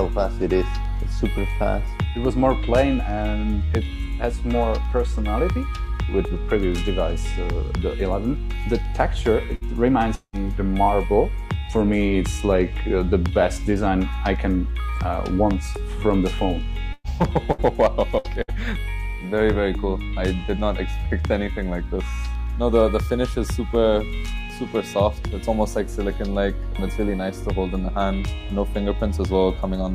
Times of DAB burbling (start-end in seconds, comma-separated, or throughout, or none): none